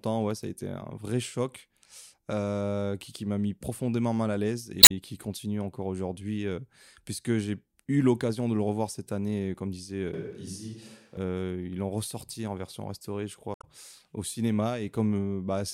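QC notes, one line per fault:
4.80–4.91 s and 13.52–13.64 s, damaged data in a compressed stream: two brief blips break into the speech, each roughly a tenth of a second. Corrupted frames throw the decoder off, so it plays garbled output while it hunts for the next valid frame header. The second burst also adds about 34 ms of extra time. A plain dropout would leave silence, and a click is far shorter and toneless.
10.14–11.17 s, switch to a distant microphone: for about one second the speech suddenly turns hollow and roomy, with thinner bass, then snaps back just as abruptly. The likely cause is that the close microphone's signal dropped out and a farther pickup filled the gap. The loudness barely changes, but room noise rises to about 35 dB below the speech. Added reverb would not change the bass or the background noise.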